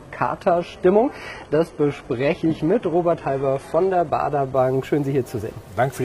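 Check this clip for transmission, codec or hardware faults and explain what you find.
One fault here: an adaptive stream starting at a low bitrate. From 0.0 to 4.55 s the player is on a cheap version of the stream while it sizes up the connection, so the top end is thin and partly synthesised and codec smearing is stronger, which fits something like HE-AAC around 16 kbit/s. At 4.55 s it jumps, with no gap, to a much cleaner rendition, consistent with AAC-LC near 96 kbit/s, though nothing comes through above about 11.8 kHz.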